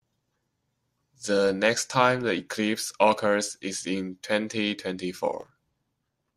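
A processor that could not keep up with its audio deadlines causes this speech clip's one fault: processor overload crackle from 5.39 to 5.83 s. Over that stretch the system missed dozens of very short buffers, each around a millisecond and a half long, and skipped them outright rather than repeating old audio. Every skip leaves a tiny hard-edged hole in the waveform, and packed this closely they turn into a gritty burst of crackle riding over the speech until the load eases.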